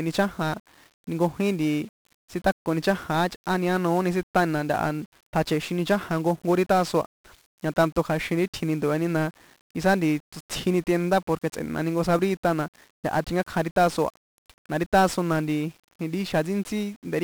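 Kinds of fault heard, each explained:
1-bit DFPWM compression: the speech runs through a one-bit-per-sample coder for the whole clip, each bit just nudging an adaptive level up or down, so the waveform is only ever roughly followed. You hear that as heavy, broadband fuzz riding under everything, a crackly grain on the voice, and hiss swamping the top end so consonants lose their edge. The damage is severe, which fits a DFPWM stream at around 48 kbps.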